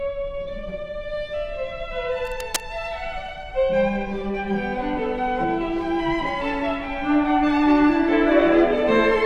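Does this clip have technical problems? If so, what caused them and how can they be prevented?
Yes. A worn cable or connector likely moved, and its rapidly fluctuating contact resistance produced cable scratch noise: uneven scratching about 10 dB below the signal from 2.25 to 2.63 s. Replace worn leads and connectors, and secure them so they cannot shift during recording.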